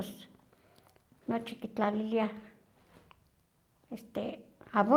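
No technical fault can be heard anywhere in the speech recording.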